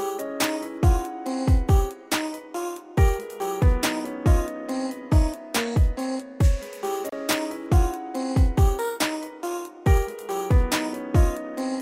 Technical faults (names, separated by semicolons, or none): gap at a join of encoded pieces